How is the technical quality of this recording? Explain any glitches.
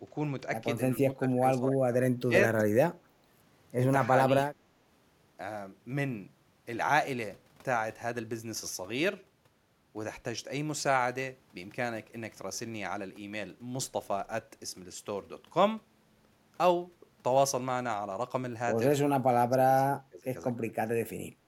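The recording has a recurring fault: speech suppressed in double talk at 1.11–2.34 s, 4.28–4.62 s, 19.5–20.29 s and 20.56–20.71 s. The voice dips by up to about 20 dB, likely because an echo canceller mistook this side's speech, overlapping the far end's, for loudspeaker echo. On a waveform these show as sudden notches in the envelope. On a spectrogram the harmonics and upper bands fade out in patches.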